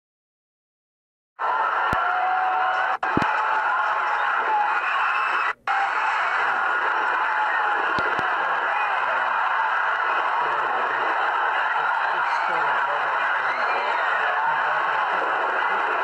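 Loud pops occur at 1.93 s, a single pop, then as double pops at 3.17 to 3.24 s and 7.99 to 8.21 s, each peaking about 15 dB above the surrounding sound. They are likely voltage pulses from a connector, switch or static, heard as sharp thumps over continuing audio.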